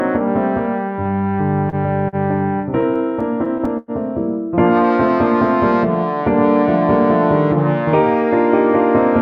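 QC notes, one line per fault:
1.69–1.76 s and 2.09–2.16 s, short stall from a late packet: each time a packet arrives late and the jitter buffer runs dry, so the last sound is held for about 32 ms, then 41 ms, before playback resumes where it stopped. Nothing is lost; unlike a stutter, each is a single isolated hold.
2.62–3.91 s, repeated stalls (stutter): packets keep arriving behind the playback rate, so the buffer empties eight times in this span. The receiver stretches the last sound each time, fading the longest hold of 103 ms, for 183 ms in total, about 14% of the span. The repeated holds make the audio drag and stutter, where the earlier stalls were single catches.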